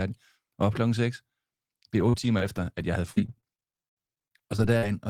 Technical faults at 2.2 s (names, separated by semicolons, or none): repeated packet loss (robotic sound)